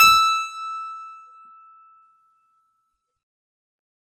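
Nothing in this short bit of music catches the ear as a technical fault, so there's nothing here to flag.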